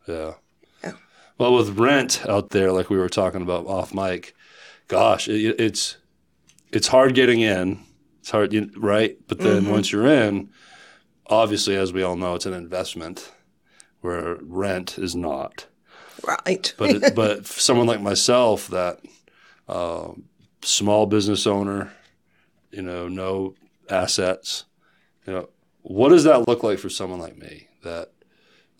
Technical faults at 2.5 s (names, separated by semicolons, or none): gap at a join of encoded pieces